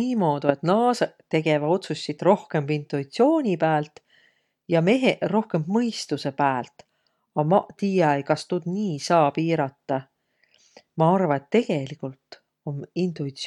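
A speech recording with one brief fault. At 0.49 s there is a sharp blip, a corrupt frame decoded. The bits in one compressed frame were damaged, and the decoder played it anyway. Misread gains and codes put energy at the wrong frequencies. The error is loud, peaking near -5 dBFS. It lasts about the length of what sounds like a single frame. The result is a short chirp-like burst that doesn't belong to the speech.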